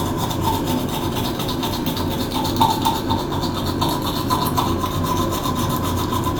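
Nothing technical to flag in this everyday-sound recording; there's simply no fault to point to anywhere in it.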